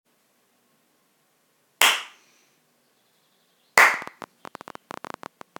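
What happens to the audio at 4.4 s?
At 4.4 s a train of clicks, from 3.94 to 5.57 s, ticks irregularly about 13.5 times a second, likely from interference, showing as thin vertical broadband streaks and sharp waveform spikes.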